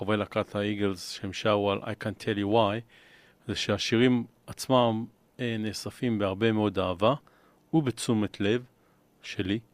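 No technical faults can be heard at any point in the speech.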